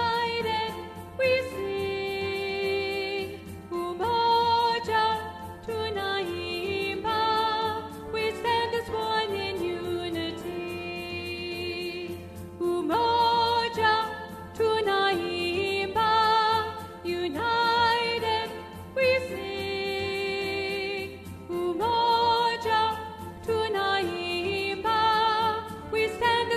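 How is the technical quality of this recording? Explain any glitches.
No glitches or technical faults can be heard anywhere in the recording, and the signal stays steady and intact throughout.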